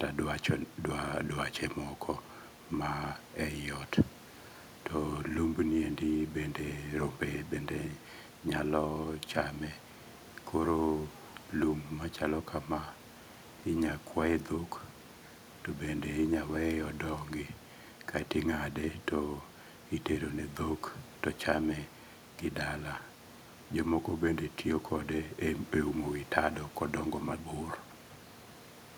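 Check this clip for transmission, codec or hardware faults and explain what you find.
Nothing found: no faults in the speech, and the room noise about 23 dB below it belongs to the recording itself.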